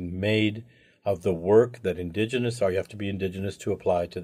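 No technical faults can be heard anywhere in the recording.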